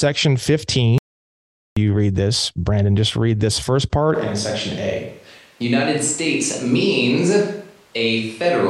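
At 0.98 s the speech cuts off mid-flow into dead silence, with no room tone underneath, and it returns just as abruptly at 1.77 s. About 0.78 s of speech is simply missing. This is an audio dropout to silence: the input was likely lost for that stretch, through a disconnected device, a failed link or an accidental mute, while the recorder kept writing silence in its place.

From 4.16 s to the end, the voice suddenly turns roomy and hollow, with thinner low end and background noise now sitting around 35 dB below the speech, though the overall level stays roughly the same. This points to a switch to a distant microphone: the close microphone's signal likely dropped out or was left unused, and the recording carries on from a mic placed further away.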